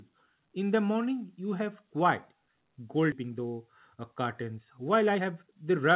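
A skip ahead occurs at 3.12 to 3.14 s. About a second of the speech never reaches playback, lost in transit or discarded by an overflowing jitter buffer while later audio was already queued. There is no filler and almost no gap. The sound on either side of the jump is spliced straight together, so the speech lurches forward abruptly, with a clipped, discontinuous join where the missing stretch should be.

A jitter buffer speed-up follows from 3.22 to 5.78 s. The receiver's buffer was holding more audio than its target, so it trimmed many short pieces of one or a few pitch periods each, removing roughly 0.3 s in total. The speech runs at 110% speed with its pitch unchanged. It sounds hurried and compressed in rhythm, and the G.711 A-law call codec's band limit at 4 kHz stays in place throughout.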